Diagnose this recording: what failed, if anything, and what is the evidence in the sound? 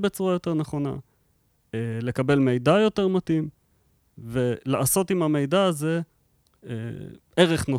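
Nothing failed: across the speech there is no audible evidence of a fault at any stage, from the analogue front end through to playback.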